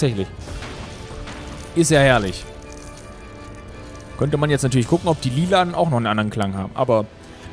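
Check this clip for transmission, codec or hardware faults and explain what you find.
Nothing stood out on listening to this clip.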